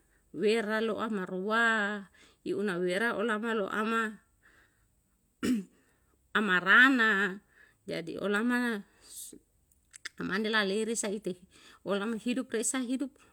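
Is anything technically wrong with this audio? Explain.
No, the signal holds steady and intact throughout, with nothing technically amiss to report.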